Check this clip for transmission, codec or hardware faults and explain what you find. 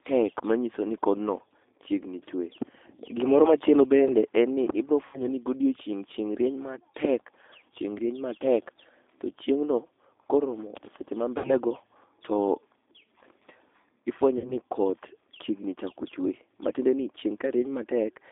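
The speech carries codec damage throughout and three brief dropouts that were patched over by the decoder.

G.729 codec, throughout the 18 s clip: an 8 kbit/s model rebuilds each 10 ms frame from a vocal tract filter, pitch predictor and a few pulses. The line passes only about 150 Hz to 3.6 kHz, so the voice sounds thin, plainly rough and slightly synthetic.

VoIP packet loss concealed by the speech codec, at 5.07–5.22 s, 11.38–11.55 s and 14.38–14.56 s: each time about 60 ms of audio went missing, which fits two lost packets. The decoder stretched its last pitch and filter, fading the gain, so the voice turns into a short buzzy tone or coloured noise that fades. Because each frame builds on the previous one, the distortion lingers to roughly 150–180 ms in total before the voice fully recovers.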